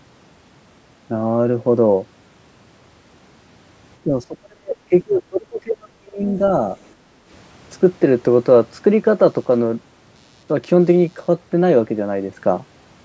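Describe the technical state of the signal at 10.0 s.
At 10.0 s you're inside a stretch of computer activity noise running from about 9.28 to 11.28 s. Processor or peripheral load is nudging the shared ground, so a faint buzz pulsing around a hundred times a second sits far below the speech.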